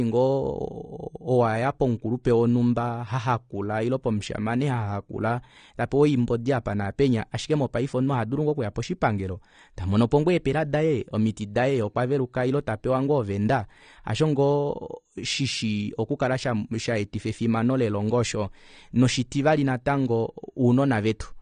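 From start to finish the speech sounds dull and smeared, nothing above 9.7 kHz, with a warbling, fizzy edge on sustained sounds and sibilants. This is likely AAC compression at a low bitrate, which fits roughly 32 kbps, where the encoder drops the high band and starves the rest.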